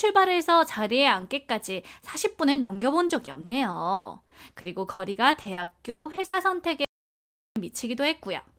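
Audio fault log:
2.51–6.35 s, repeated packet loss (robotic sound): packets kept going missing here, with a couple of dozen short holes up to 160 ms each. Every hole gets patched by stretching the last bit of audio, about 30% of the stretch in all, so it turns choppy with pieces missing.
6.85–7.56 s, audio dropout to silence: the sound cuts to silence for about 0.71 s, with no room tone at all. That points to the input likely being lost while the recorder kept writing silence, so whatever was said there is gone.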